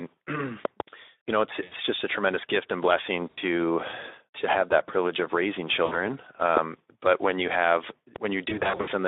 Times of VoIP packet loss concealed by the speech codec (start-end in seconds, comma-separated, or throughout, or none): 1.63-1.74, 3.29-3.39, 5.85-6.00, 8.49-8.89